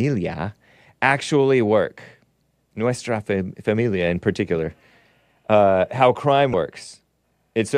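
At 6.51 to 6.54 s, damaged data in the compressed stream makes the decoder misread frames and lose sync, producing a brief glitch in the speech.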